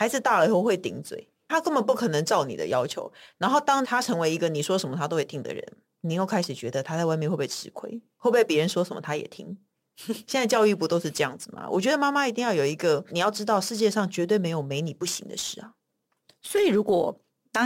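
Speech with crude rate conversion throughout. Samples are dropped without filtering, which fits a 48 kHz to 44.1 kHz change. A gritty, inharmonic fizz follows the louder, brighter sounds, roughly 25 dB down.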